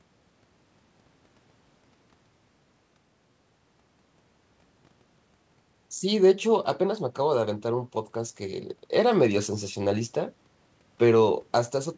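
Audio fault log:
No faults heard in this speech clip.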